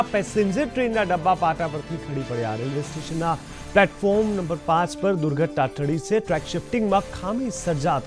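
No technical faults are audible.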